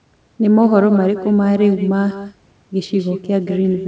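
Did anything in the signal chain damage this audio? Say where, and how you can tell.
Yes. Echo with no canceller runs throughout this speech clip, a call-processing fault. Every phrase returns about a fifth of a second later, about 13 dB down and thinner: the far end's loudspeaker feeds its microphone, and nothing subtracts it before the band-limited call audio returns.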